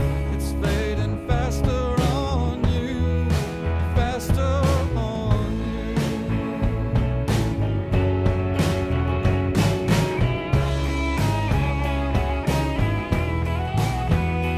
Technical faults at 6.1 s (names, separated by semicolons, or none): none